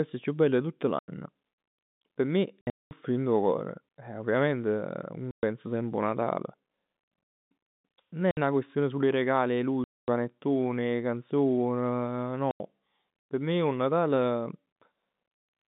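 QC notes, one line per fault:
0.99–14.76 s, packet loss filled with silence: seven hard-edged holes, at 0.99 s (90 ms, right after "chiù bell 'e tutt"), 2.61–2.91 s (scattered gaps, longest 210 ms), 5.31 s (120 ms, before "semp 'o"), 8.31 s (60 ms, before "'na question sul 'e"), 9.84 s (240 ms), 12.51 s (90 ms) and 14.73 s (30 ms). Every gap is a multiple of 30 ms, which fits 30 ms packets going missing. The receiver played pure silence in their place, so the speech cuts out abruptly at each gap.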